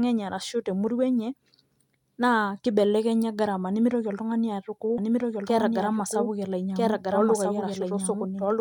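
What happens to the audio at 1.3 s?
Nothing goes wrong at 1.3 s; the speech runs through that moment intact, with no dropout, click or distortion.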